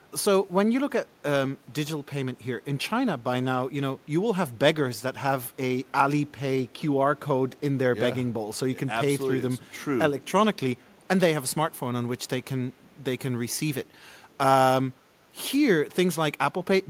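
The far end's echo canceller likely passed residue back, an echo leak: very faint scraps of the speech return 428 ms late at 5.85, 6.68, 7.49 and 10.78 s.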